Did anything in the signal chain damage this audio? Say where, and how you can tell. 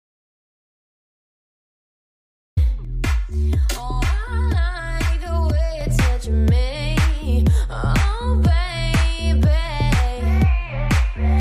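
Yes. An audio dropout to silence runs from the start to 2.57 s. It is silent, with no room tone. A disconnected input is the likely cause.

From 2.85 to 5.81 s the sound turns hollow. This is channel delay causing comb filtering. One channel lags roughly 3 ms in a buffer. The mono sum cuts fixed notches, the first around 150 Hz.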